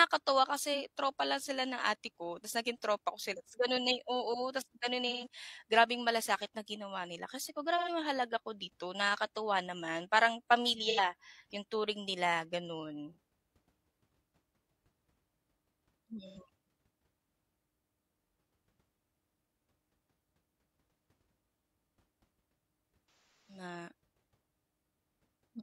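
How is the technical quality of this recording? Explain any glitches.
The recording has repeated AAC frame loss with concealment. Glitches occur at 0.74–0.79, 5.09–5.26, 7.77–7.89, 10.89–10.99, 13.12–13.17, 16.26–16.38 and 23.33–23.63 s. Compressed frames went missing, and the decoder rebuilt them from the last good spectrum. Short gaps sound smeared and phasey. The longest gap, about 0.3 s, fades down and back.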